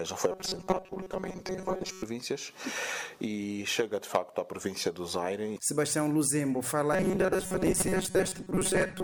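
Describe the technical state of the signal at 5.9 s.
At 5.9 s the signal is intact, with no dropout, distortion, noise or other fault at that moment.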